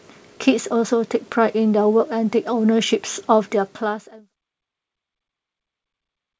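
The speech shows no technical faults: its level eases smoothly down from around 3 s to silence at 4.34 s, and it carries nothing above 8 kHz, which fits a call path through a wideband codec such as G.722.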